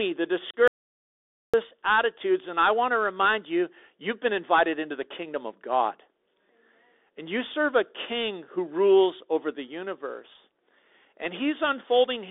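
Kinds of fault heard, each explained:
Bluetooth CVSD headset codec: The whole clip has the sound of a narrowband headset link that encodes each sample as a single up-or-down step whose size adapts. The speech sits roughly between 300 Hz and 3.6 kHz, with nothing above 3.8 kHz, which fits a 64 kbps CVSD stream. The damage is plainly audible: sibilants turn scratchy, loud bright moments distort as the step size fails to keep up, and a granular hiss runs underneath. A simple low-pass filter would dull the sound without adding that grainy, slope-overload roughness.
Audio dropout to silence: From 0.68 s to 1.54 s the sound cuts out completely, losing about 0.86 s. The speech stops and resumes mid-flow, and during the gap there is silence with no room tone, so what was said there is gone. The likely cause is input from the headset link being lost while the recorder kept writing silence. A noise gate or fade would taper the sound or leave some background, whereas this gap falls straight to nothing and returns just as abruptly.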